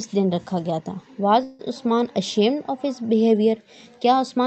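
Sample clock jitter runs through the whole clip as a faint hiss and roughness that follows the sound, growing on loud, bright passages and vanishing in pauses. The converter's clock wavers by well under a microsecond, leaving an error roughly 55 dB below the signal, which shows on a spectrogram as a thin haze of noise that appears only where the signal is strong.

From 1.43 to 1.75 s there is a call audio freeze. The last sound is drawn out as a fading buzz or hiss for about 159 ms before the audio resumes where it stopped, so time is inserted and nothing is lost. This likely comes from delayed packets emptying the jitter buffer. A spectrogram shows a smeared, static stretch with the bands held flat, and the waveform shows a decaying repeated texture rather than a gap.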